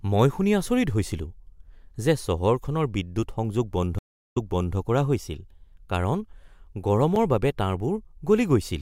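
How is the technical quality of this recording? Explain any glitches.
The speech recording has two distinct glitches.

From 3.99 to 4.76 s there is a stream reconnect. The connection dropped, leaving about 360 ms of silence, and a fresh decoder picked up mid-stream. Playback resumes 418 ms earlier than where it stopped, so a short stretch of speech is heard twice.

At 7.16 s a block of digital silence lasts 5.33 ms. A block of zeros was played, cutting in and out with no fade, so the gap is heard as a tick or dip rather than as silence. The 256-sample gap fits a 48 kHz stream missing one output buffer.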